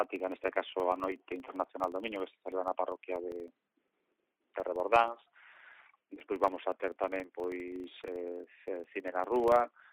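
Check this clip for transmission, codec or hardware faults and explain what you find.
One processing fault runs through the whole clip. Filter restarted on every block: the filter drops its state each 40 ms block, producing a 25 Hz buzz that tracks the signal level.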